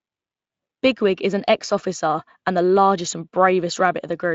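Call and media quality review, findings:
No faults found in this speech clip; nothing to flag.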